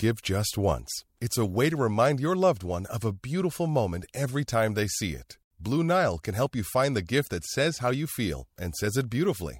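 No technical faults can be heard anywhere in the recording.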